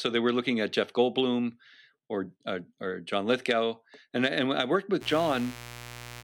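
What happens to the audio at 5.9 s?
A steady, raspy buzz sits under the speech at 5.9 s. It is mains buzz that comes in at 4.99 s and runs to the end of the clip, only around 15 dB below the speech. It is built on 60 Hz, with sharp interference spikes entering twice per mains cycle through a dimmer, rectifier or poorly shielded connection. Those spikes carry harmonics of 60 Hz up into the kilohertz range, which gives the buzz its gritty edge.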